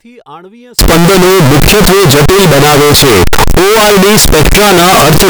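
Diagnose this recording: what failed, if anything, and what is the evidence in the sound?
From 0.79 s to the end the speech turns into loud, harsh distortion, and even the quiet gaps blare as loud as the speech. That's the sample-format conversion stage, likely signed and unsigned mixed up on what sounds like 16-bit audio: the flipped top bit turns every zero crossing into a full-range jump.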